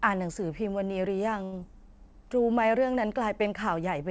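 From 1.44 to 1.54 s there is a short stall from a late packet: the jitter buffer ran dry and the last sound was stretched for about 84 ms before resuming where it left off. On a spectrogram the harmonics run flat and unchanging, and the waveform repeats a steady cycle, with everything after it pushed later by 84 ms.

At 1.60 to 1.63 s comes a short concealed packet loss. About 21 ms of audio is gone, bridged by a brief 9 ms fill and a quick blend. It sounds like a small smear or wobble, and appears as a narrow seam or discontinuity in the waveform and spectrogram. Throughout, the spectrum stops at 8 kHz, which fits a wideband call codec such as G.722.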